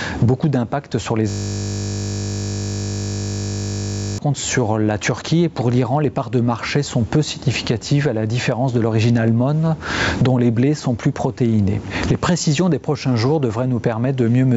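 Gain pumping runs through the whole clip, with level swings of about 25 dB and a squashed, flattened dynamic range. The likely cause is input gain set far too high, with a fast limiter clamping down on every peak.

A system hang loop occupies 1.30 to 4.18 s: a single 20 ms fragment repeats exactly, producing a steady 50 Hz buzz. The computer or driver stalled while the audio hardware kept replaying the same small ring buffer. The call's microphone processing passes nothing above 8 kHz.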